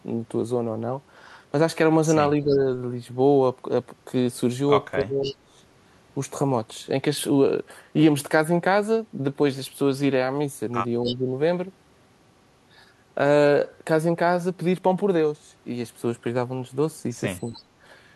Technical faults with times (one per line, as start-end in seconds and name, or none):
0.00-18.16 block size mismatch (truncated)
2.41-2.67 speech suppressed in double talk
4.98-5.52 speech suppressed in double talk
5.24-5.35 echo leak
11.04-11.16 echo leak
11.06-11.27 speech suppressed in double talk
17.46-17.60 echo leak